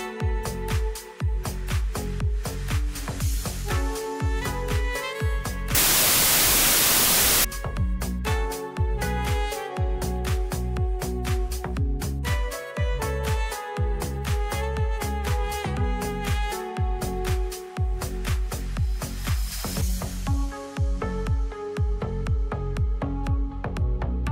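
From 5.75 to 7.44 s the audio turns into loud, harsh noise with the original sound faintly audible underneath. This is a wrong sample width fault: data packed as 24-bit integers is being read as 16-bit. Each 16-bit value then takes two consecutive bytes that drift across the 24-bit sample boundaries, so many are built from mismatched bytes, and only some carry the true top bits. What survives plays at about two-thirds speed and lower in pitch.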